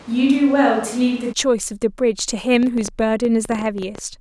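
From the start until 1.31 s, the close microphone has likely dropped out for a switch to a distant microphone, so the speech sounds roomy and hollow, with thinner bass and audible room noise. From 2.55 to 3.99 s, interference or a faulty connection is likely injecting a train of clicks, about 12 per second at an uneven pace, ticking over the speech and rising somewhat above it.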